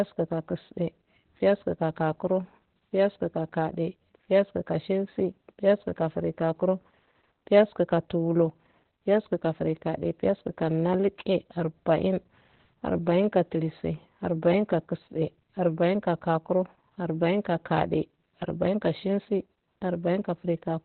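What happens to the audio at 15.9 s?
At 15.9 s, as throughout, Opus voice compression in narrowband SILK mode cuts everything above about 4.3 kHz, and its coarse excitation leaves speech hoarse and robotic, not merely muffled as with a plain low-pass. This fits a bitrate near 8 kbps.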